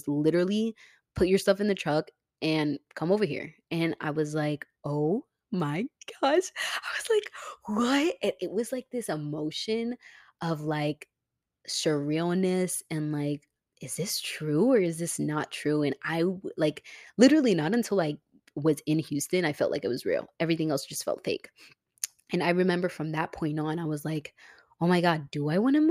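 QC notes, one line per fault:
No faults heard anywhere in this speech recording.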